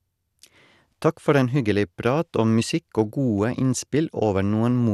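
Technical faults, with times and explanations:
Throughout, MP2 compression: the speech is dull, with nothing above 12.2 kHz, and carries a plainly audible gurgling, granular roughness as upper sub-bands drop in and out and the surviving bands are coarsely quantised. The likely cause is MPEG Layer II coding at a rate that fits roughly 80 kbps. Unlike a plain low-pass filter, the top end flickers and the grit sits inside the remaining bands, not just a missing treble.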